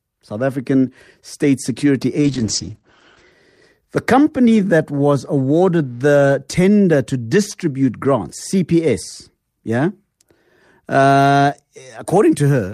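Speech that suffers a call bitrate drop from 2.22 to 3.37 s. The encoder is starved of bits, so the sound turns rough and watery and loses its top end, which fits a fall from roughly 32 kbps to about 9 kbps with bandwidth shrinking from 20 kHz to 8 kHz for about a second. Unlike packet loss, nothing drops out or repeats. Unlike a simple low-pass, coarse coding artefacts accompany the dulling.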